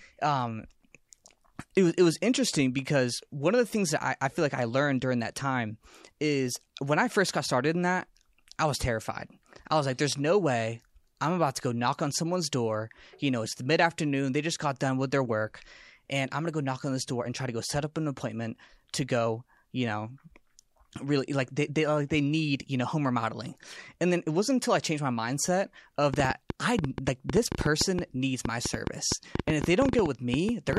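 Something, most likely interference from nearby equipment or a faulty connection or power supply, starts injecting pulses at 26.14 s, producing a train of clicks that runs until 30.78 s. Around forty similar clicks arrive at an uneven pace, about 8.2 per second, popping well above the speech and into its pauses.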